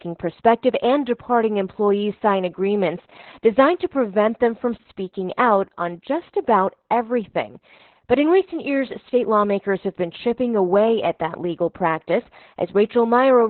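Speech runs through heavy Opus voice compression for the whole clip, and the band stops at about 4.3 kHz, so sibilants and breath detail are gone and the voice sounds muffled, hoarse and faintly robotic. That points to the SILK coder in narrowband mode at a very low rate, around 8 kbps, with the excitation coded coarsely. A plain low-pass filter would dull the top but keep the voice smooth. Here the rasp and synthetic buzz come from the coder itself.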